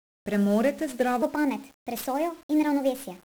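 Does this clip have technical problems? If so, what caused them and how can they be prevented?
Yes. 1-bit DFPWM compression runs throughout. One bit per sample steers an adaptive level, so this speech sounds fuzzy and crackly, with treble buried in hiss. The 48 kbps rate points to a DFPWM encode. Prevent it by using a higher-resolution codec.

From 1.22 s to the end, a section at the wrong speed plays 1.32 times fast. Pitch rises roughly five semitones and the speech sounds hurried. The likely cause is playback or editing on a mismatched clock. Prevent it by checking sample-rate settings match throughout the chain.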